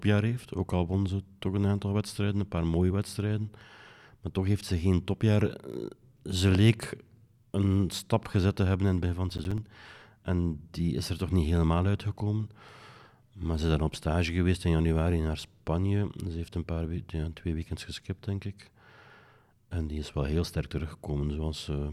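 Processor overload crackle at 9.30 to 9.58 s, after "het begin van het": about five buffers miss their deadlines and drop into roughly 10 ms silent gaps, heard as gritty tearing.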